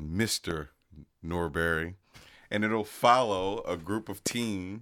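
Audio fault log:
0.51–0.53 s, loud pop: a voltage spike, likely from a switch or static, enters the signal, adding one sharp pop about 10 dB above the continuing speech.
4.27–4.33 s, loud pop: a voltage disturbance, likely a plug or driver glitch, injects two pulses in quick succession, heard as a double pop about 15 dB above the speech.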